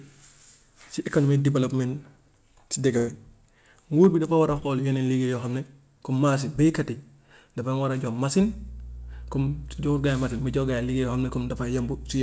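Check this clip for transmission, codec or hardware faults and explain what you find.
Two transmission faults are present, both from packets lost on the way to the receiver. The call path's coding shows as nothing above 8 kHz, which fits a wideband codec such as G.722.

From 2.98 to 3.10 s there is a burst of packet loss. About 100 ms of audio never arrived in time, so the receiver stretched the last sound for roughly 96 ms and faded it into a flat buzz or hiss. On a spectrogram this shows as smeared, frozen bands, and the waveform shows a decaying envelope before speech resumes further on.

From 4.60 to 4.64 s there is a short concealed packet loss. About 20 ms went missing, and the decoder synthesised roughly 23 ms from the preceding sound before blending back. It is heard as a brief smear or wobble, and on a spectrogram it appears as a thin vertical blur with slightly flattened harmonics.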